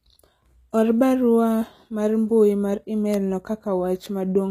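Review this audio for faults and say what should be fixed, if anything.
The speech has been squeezed through a low-rate codec, most likely HE-AAC compression at a bitrate around 20 kbps. The encoder spends its bits only on the lower spectrum and synthesises the treble by copying lower bands upward under a coarse envelope, so the top end is extended but not the original, and nothing survives above 14.9 kHz. Harmonics fail to align across the crossover, and the damage is plainly audible: sibilants come out gritty, metallic and lisped. To prevent this, encode at a higher bitrate or with plain AAC or a lossless format, so the treble is coded rather than reconstructed.

A bit error spike occurs twice, at 3.14 s and 4.06 s. In each case a single bit flipped on the digital path, in memory or on a link, throwing one sample, or two adjacent ones at 3.14 s, off by a power of two before the waveform snaps back. 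Each is heard as one sharp, broadband tick that has nothing to do with the speech around it. To prevent this, protect the transfer and storage path with checksums or error-correcting memory, and replace failing cables or interfaces.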